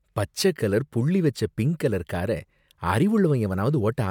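Nothing in the speech here stands out as a technical fault; there's no point in the recording where anything audibly goes wrong.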